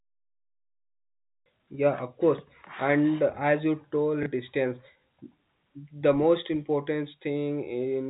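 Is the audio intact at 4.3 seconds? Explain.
No. Right after "course and as you", from 4.23 to 4.26 s, there is packet loss with the last packet repeated. About 30 ms of audio is missing, consistent with one dropped packet, and the receiver replays the previous packet. The single repeat sounds like a small blip.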